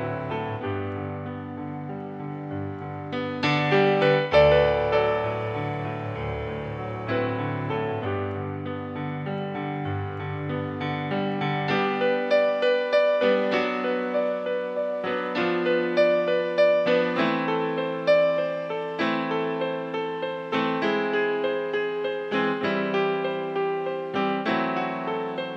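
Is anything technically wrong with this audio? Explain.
No, no technical faults heard.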